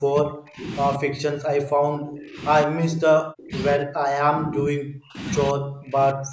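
From 0.0 to 0.66 s, 0.97 to 2.41 s, 2.65 to 3.53 s, 3.75 to 5.18 s and 5.53 to 6.32 s, the speech sinks by as much as around 40 dB in uneven, choppy stretches. This is speech suppressed in double talk, likely from an echo canceller that mistook the talker for echo while both sides spoke and pulled the signal down. Packet loss leaves brief, sharp-edged gaps, but these dips stretch over long spans.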